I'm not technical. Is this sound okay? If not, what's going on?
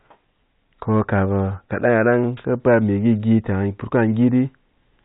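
Yes, this sound is okay, with nothing going wrong in it.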